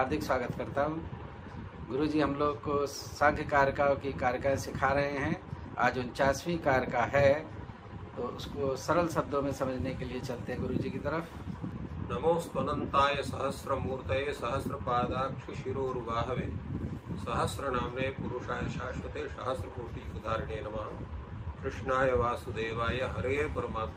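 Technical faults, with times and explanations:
No technical faults found anywhere in the audio.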